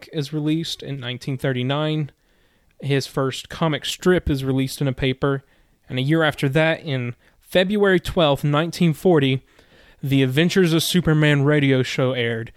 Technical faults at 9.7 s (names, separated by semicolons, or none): none